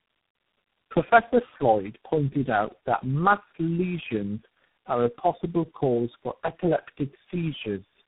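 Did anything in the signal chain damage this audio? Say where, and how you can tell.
Yes, at the codec stage: this speech shows tandem speech coding all the way through. It's muffled, with nothing above about 3.8 kHz, plus a rough, warbly texture. That points to roughly four low-rate coders in a row, each one re-encoding the previous one's damage.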